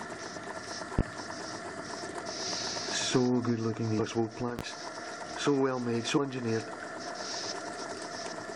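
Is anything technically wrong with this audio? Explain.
Yes, two kinds of fault are audible.

A loud pop occurs at 0.99 to 1.03 s, peaking about 20 dB above the sound, and another at 4.59 to 4.63 s, about 15 dB above it. Each is a single sharp thump over continuing audio, likely from a voltage step such as a switch or static. On the waveform each is a tall isolated spike, and on the spectrogram a thin full-height vertical line.

Compressed frames are skipped at 3.98 s and again at 6.17 to 6.19 s. Each time the audio jumps forward by roughly 200 ms, which points to several whole frames of about 23.2 ms going unplayed. Each is heard as an abrupt jump at the join. The spectrogram shows a seam where the content abruptly changes.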